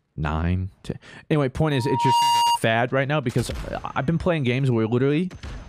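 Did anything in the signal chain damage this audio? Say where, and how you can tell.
Yes: loudspeaker feedback squeal in the analogue acoustic path. A 943 Hz tone swells over about half a second from 1.71 s, then stops at 2.58 s, sitting a few dB above the audio.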